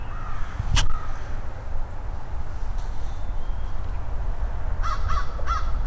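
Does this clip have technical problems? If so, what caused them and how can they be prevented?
No technical faults are audible.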